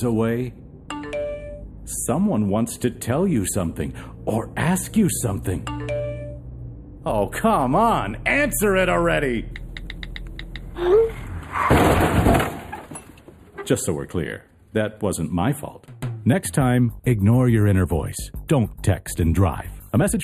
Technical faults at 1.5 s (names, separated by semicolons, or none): channel delay (comb filtering)